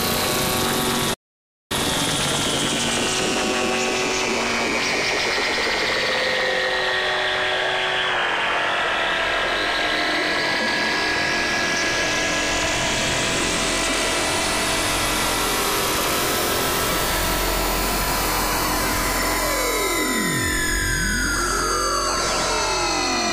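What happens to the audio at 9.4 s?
Nothing goes wrong at 9.4 s; the sound carries on intact through that moment, with no dropout, click or other fault.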